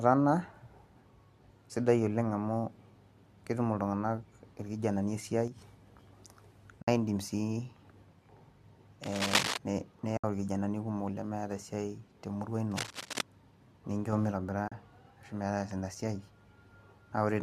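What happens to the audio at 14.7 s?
From 14.68 to 14.72 s there is AAC frame loss with muting: about 40 ms of sound is zeroed, which fits four lost frames of the likely low-delay AAC stream. The overlapping windows fade it out and back in, so unlike a hard dropout the gap has soft edges.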